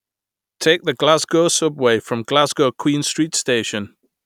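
Nothing goes wrong anywhere in this bit of speech, so there's no technical fault to point to.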